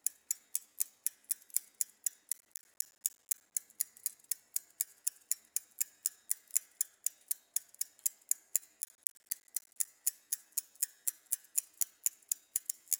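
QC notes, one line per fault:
2.33–3.52 s: processor overload crackle. The processor falls behind and misses one short buffer deadline after another. Each miss drops out as a brief hard-edged silence. Dozens of these tiny gaps in a row form a gritty, tearing crackle over the sound. The spacing fits buffers of about 10 ms.
8.82–9.87 s: processor overload crackle again. The same burst of silent dropouts tears the sound for about a second, then stops as the load eases.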